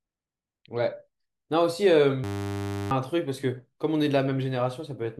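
From 2.24 to 2.91 s a system hang loop repeats one 10 ms slice, a steady 100 Hz buzz, not a silent dropout.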